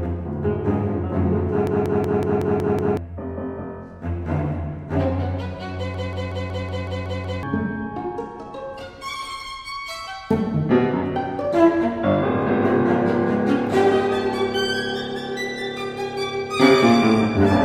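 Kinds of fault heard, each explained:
System hang loop: a machine-gun stutter of one 186 ms fragment repeating 5.38 times a second, at 1.67–2.97 s and 5.94–7.43 s. The system froze while the hardware kept replaying its ring buffer, which fits an 8192-sample buffer, losing roughly 1.5 s each time.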